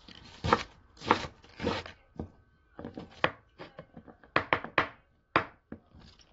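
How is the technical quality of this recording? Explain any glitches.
The quality is compromised throughout by one fault. The whole clip sounds dull and smeared, with a watery, fizzy texture and nothing above 7.6 kHz. That points to likely AAC compression at a low bitrate, about 24 kbps, where the encoder drops high frequencies and coarsely quantises the rest.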